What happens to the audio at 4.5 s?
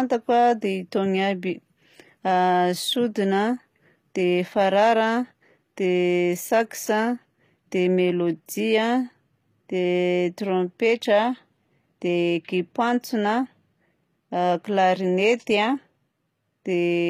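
At 4.5 s the speech likely passes through HE-AAC compression at a low bitrate near 24 kbps, rebuilding treble from copied lower bands, so s sounds turn gritty and metallic throughout.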